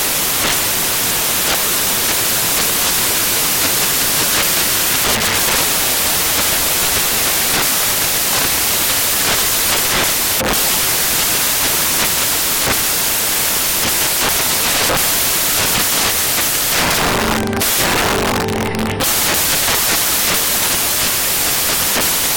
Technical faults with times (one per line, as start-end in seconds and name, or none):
0.00-22.37 samples built from the wrong bytes